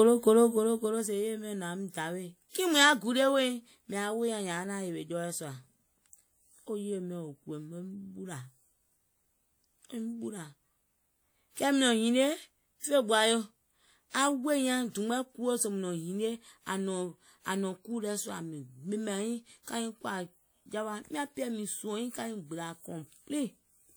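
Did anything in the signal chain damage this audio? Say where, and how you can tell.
Yes, at the codec stage: pre-echo from 2.49 to 2.55 s, just before "kiìŋ mùŋ yaà gulie". Quantisation noise spread across the transform block leaks about 57 ms ahead of the attack as hiss, showing as a broadband smear before the onset on a spectrogram.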